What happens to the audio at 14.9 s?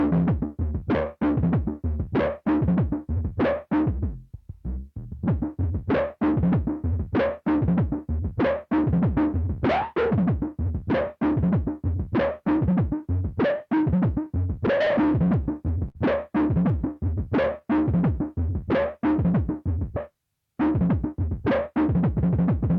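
From 14.85 to 15.97 s the audio stutters through seven brief stalls: repeated stalls (stutter), as late packets leave the jitter buffer running empty.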